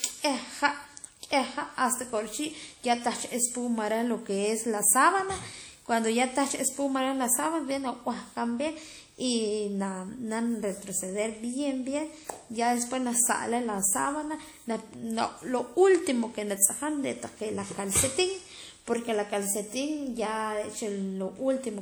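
Across the speech, plainly audible damage, likely from low-bitrate WMA compression, smears noise into ringing, breathing wash. The spectrogram shows blurred, patchy bands up to 20.1 kHz.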